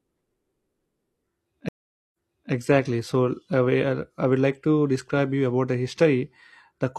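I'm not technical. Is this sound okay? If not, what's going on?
No. At 1.69 seconds the connection dropped and the player restarted, a stream reconnect. The speech cuts to silence for about half a second, then picks up 0.38 seconds before where it stopped, so a short bit repeats, settling by 2.52 seconds.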